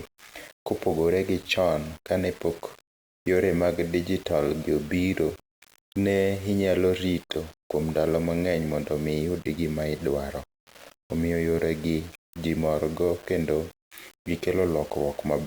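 From start to finish, the speech was likely reduced to low bit depth without dither, with samples rounded to only 6 bits and no added noise to break up the error. Because the rounding error tracks the waveform, it sits only about 25 dB below the speech and rises and falls with it. Quieter syllables and decays sound gritty and grainy, and the faintest passages sputter or collapse toward silence between steps.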